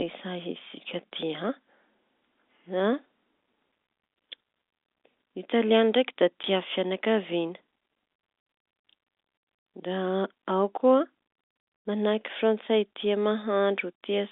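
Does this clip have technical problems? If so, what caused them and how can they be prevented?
Yes. Packet loss filled with silence at 6.43 s leaves a 10 ms hole, fitting one lost packet. The waveform drops flat there, and a spectrogram shows a blank slot. Packet loss concealment at the receiver would fill such gaps smoothly.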